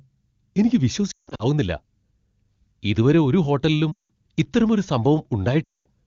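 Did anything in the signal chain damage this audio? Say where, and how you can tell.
Yes, it's lost AMR speech frames on the radio link, with wideband voice at what sounds like its top rate. There are three gaps. At 1.11–1.46 s about 220 ms drops out in patches, the longest run about 160 ms. At 3.91–4.12 s, right after "ഇതുവരെ ഒരു ഹോട്ടലിലും", it's about 180 ms. At 5.64–5.87 s it's about 220 ms. Each time the decoder reuses the last good pitch and spectrum while fading the gain, so the sound drops to near silence within two frames.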